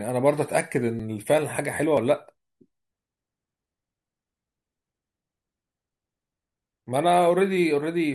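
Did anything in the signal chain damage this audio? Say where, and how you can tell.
Yes. Audio missing between chunks shows up at 1.0, 1.97 and 6.87 s as abrupt skips of about 20 ms. They fall on one-second boundaries, likely a buffer dropping audio at each chunk handover.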